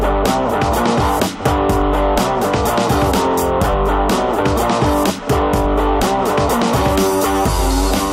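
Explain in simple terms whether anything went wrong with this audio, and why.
Nothing went wrong with this audio, because no fault can be heard anywhere in it.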